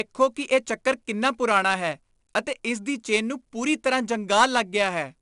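Throughout the speech, 4-bit ADPCM compression is plainly audible. Each sample is coded as a coarse 4-bit step from a predicted value, leaving level-following gritty hiss on louder passages. Nothing is present above 10.7 kHz, consistent with roughly 89 kbps.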